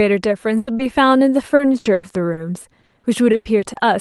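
From 0.57 to 0.69 s there is a burst of packet loss. About 100 ms of speech never arrived, and the receiver stretched the last sound into a decaying buzz or hiss before jumping ahead. Unlike a brief concealment, this is long enough to hear a held, fading tone and a clear skip in the speech.

At 0.77 to 0.81 s comes a short concealed packet loss of only about 20 ms. The decoder bridged it by extrapolating the preceding sound and blending back in, so it registers as a quick smear or wobble rather than a sustained buzz.

From 1.55 to 2.39 s, repeated packet loss gives a robotic sound. Four separate gaps, the longest 100 ms, cover about 29% of that stretch. Patch follows patch so closely that the speech turns choppy, quite different from one isolated dropout.

The same repeated packet loss (robotic sound) returns from 2.81 to 3.77 s. This time seven gaps, again up to 100 ms each, conceal about 29% of the span, so the stuttering is denser.

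All of this rides on an Opus call path band-limited to about 12 kHz.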